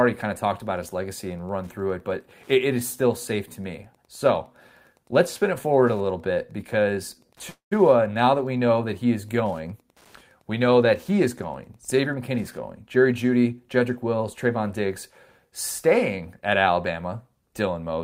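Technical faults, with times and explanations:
0.0–12.57 s, Wi-Fi interference: a nearby radio's beacon, every 102.4 ms, is rectified into a faint tick about ten times a second, roughly 40 dB below the speech.
7.49–7.73 s, call audio freeze: sound stretches into a fading buzz or hiss, then 120 ms of silence, before resuming; likely delayed packets emptying the jitter buffer, inserting 220 ms with nothing lost.
12.05–12.39 s and 12.83–14.48 s, jitter buffer speed-up: repeated removal of pitch-period slices shortens the backlog, first at 123% speed cutting about 70 ms, then at 108% cutting about 150 ms.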